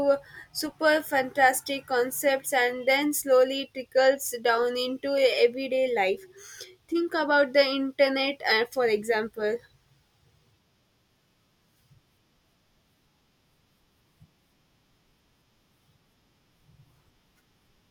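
Dropped samples, likely a few lost from the stream, make the speech waveform jump at 0.61 s and 9.14 s, each heard as a single sharp click.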